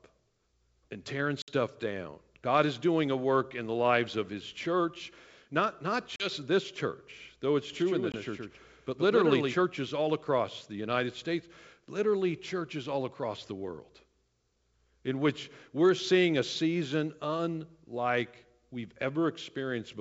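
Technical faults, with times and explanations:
1.42–1.51 s, 6.16–6.30 s and 8.12–8.16 s, packet loss on an ADPCM call: the sound drops into hard-edged silence after "and tearing", between "church not not" and "this church though it's", and once more briefly inside the doubled passage. The gaps run about 60, 40 and 20 ms. Each loss also knocks the decoder's adaptive predictor and step size out of step with the sender's, so the speech comes back slightly distorted and settles within tens of milliseconds.
7.73–9.57 s, doubled audio track: after "this church though it's" a second full-band copy of the speech runs around a tenth of a second behind the original and about 5 dB quieter. It has no decay or room colour, so it reads as a dry, flammed repeat rather than an echo. It stops abruptly just before "all across the". The likely cause is a second, slower capture path mixed back in with the direct signal. 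The wideband G.722 coding beneath stays clear up to about 7 kHz.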